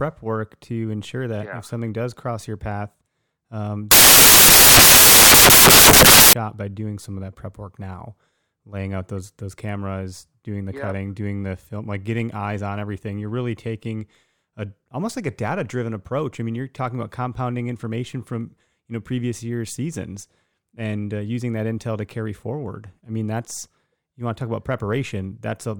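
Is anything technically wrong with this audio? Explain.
Yes. From 3.91 to 6.33 s, just before "by doing some of", the samples are built from the wrong bytes: the reader misaligns or swaps each sample's bytes, so rapidly changing low bits dominate. The speech becomes loud, harsh broadband noise.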